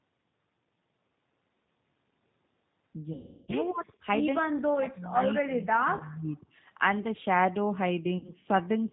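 From the start, the G.729 codec gives the speech a rough, synthetic edge, which fits an 8 kbit/s codec. The spectrogram shows an empty band above 4 kHz throughout. From 3.13 to 3.56 s, VoIP packet loss concealed by the speech codec replaces about 360 ms of speech with a stretched, buzzy tone that fades. The decoder is repeating its last pitch, so the spectrogram shows smeared, flat harmonics and the waveform shows a decaying envelope. Between 5.44 and 6.37 s, the speech dips by up to about 25 dB and breaks up over roughly a second, appearing as a sunken, patchy stretch in the waveform. The likely cause is speech suppressed in double talk, where the echo canceller turned this talker down while the other side spoke. Inside that dip, a short concealed loss at 5.97 to 6.03 s adds a brief blur. A final concealed loss from 8.18 to 8.32 s turns about 60 ms into a fading buzz, visible as a small smeared patch of repeated harmonics.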